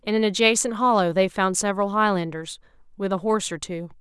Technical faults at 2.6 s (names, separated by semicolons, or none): none